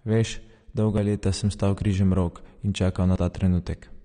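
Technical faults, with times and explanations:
throughout: AAC compression. The speech sounds dull and smeared, with a watery, fizzy edge on sibilants and plainly audible codec damage, and nothing is present above about 9.7 kHz. This is likely lossy AAC-LC coding at a low rate, which fits a bitrate around 32 kbps: the encoder lowers its cut-off to save bits and quantises the remaining bands coarsely, blurring fine detail and leaving that warbling texture.
0.98 s, 1.77 s, 3.16 s: dropped buffer (overrun). Each is an abrupt jump forward in the sound with no gap of silence. The second comes just after "sem stal". The likely cause is that the recording program fell behind and the hardware overwrote samples before they were collected, so a chunk vanished and the two sides were spliced together. Roughly 20 ms went missing at the first two points and about 50 ms at the third.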